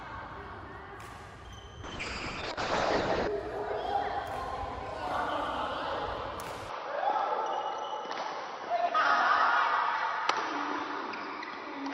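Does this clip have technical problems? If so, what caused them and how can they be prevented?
Yes, there are two problems.

From 1.84 to 3.35 s there's a call bitrate drop. The bandwidth estimate collapsed, so the encoder coded far more coarsely and pulled its top end down from 20 kHz to 8 kHz. It bottoms out for about 1.4 s, where the sound fits something near 6 kbps: rough, watery and dulled until the rate climbs back. Giving the call a steadier network path or setting a higher minimum bitrate would prevent it.

From 6.69 s to the end, the sound abruptly narrows, with nothing left above 6 kHz, and shifts in level by roughly 5 dB. A faint new noise floor appears well below the signal, around 55 dB down. There's no gap at the change. The likely cause is that the input switched to a poorer device mid-recording, such as a headset's call profile. Locking the input device in the system settings before recording would prevent it.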